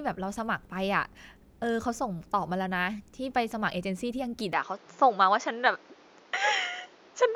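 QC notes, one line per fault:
4.53–7.35 s, input switched to a poorer device: with no gap at the change, the speech abruptly turns duller and narrower. Nothing reaches above 7.2 kHz, the level shifts by around 5 dB, and a new noise floor sits roughly 30 dB under the speech. The likely cause is the input moving to a lower-bandwidth microphone. On a spectrogram there is a hard ceiling at 7.2 kHz from 4.53 s onward. The waveform envelope steps in size at that point.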